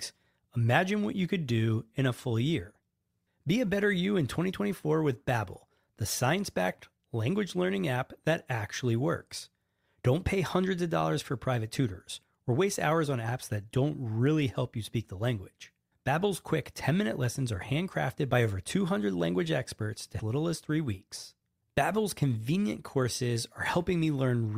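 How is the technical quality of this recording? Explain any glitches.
One glitch disrupts the recording. From 20.19 to 20.24 s, right after "language experts to", the speech jumps abruptly forward with a brief blip. This is likely a stream segment skipped: one chunk of the segmented stream failed to load, and the player carried on with the next, dropping that stretch.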